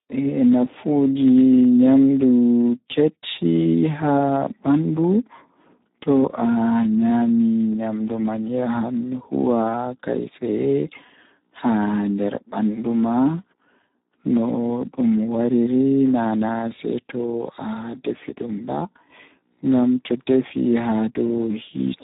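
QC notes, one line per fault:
throughout, Speex codec: the speech sounds hoarse, buzzy and noisy, edging toward robotic, with nothing above 3.8 kHz. Heavy coding damage fits an 8 kbps Speex stream, where the CELP excitation gets too few bits to carry natural voicing and detail.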